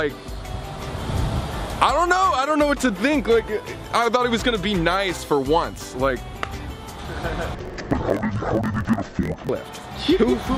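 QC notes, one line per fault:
7.55–9.50 s, interleaved audio read as planar: each 21.33 ms block's mixed left/right samples play as two half-speed halves, so the sound drops an octave, doubled and choppy at 46.9 Hz, fitting 1024-sample blocks. Spectrogram shows halved harmonics with vertical seams every 21 ms.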